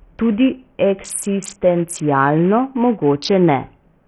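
From start to finish, the speech has likely gone through Bluetooth SBC compression with a starved bit pool, and the heavy damage points to about 48 kbps. The top sub-bands get almost no bits, so treble drops out and flickers, while coarse quantisation leaves gritty, aliased noise throughout.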